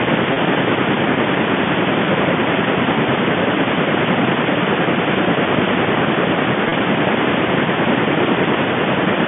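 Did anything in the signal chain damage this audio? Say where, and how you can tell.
Yes, at the network stage: packet loss with pitch repetition, at 0.33 s and again at 6.69 s, each gap about 30 ms long, which fits a single lost packet each time. The receiver filled each hole by looping the last pitch period, so you hear a brief held, buzzy tone. On a waveform those 30 ms show identical repeated cycles. On a spectrogram the harmonics run flat and frozen rather than gliding, inside the 150 Hz to 3.5 kHz G.711 telephone band.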